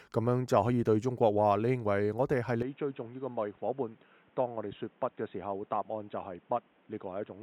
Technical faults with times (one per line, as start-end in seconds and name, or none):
2.62-7.42 input switched to a poorer device